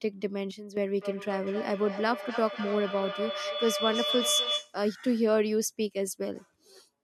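Speech, with two faults. From 0.51 to 0.77 s a sudden gain jump drops sound and background noise together by about 10 dB, likely from an unramped digital gain change, unlike a fade. From 0.97 to 4.84 s a feedback howl builds near 3 kHz, pulsing roughly every 0.3 s and peaking about 3 dB below the speech. Its growth sets it apart from a fading echo.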